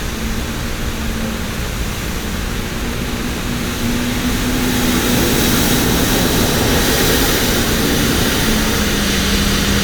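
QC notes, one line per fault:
throughout: video or display buzz, a harsh 60 Hz field-rate buzz with hash riding above it, sitting only moderately below the sound. A screen or video cable is coupling its picture timing into the audio. Its jagged, hashy texture separates it from smoother, rounder mains hum.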